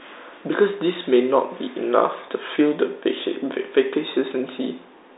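Nothing goes wrong in this speech, which just sounds like an ordinary phone line, sitting in the usual narrow band of roughly 300 Hz to 3.7 kHz with nothing reaching above about 3.8 kHz.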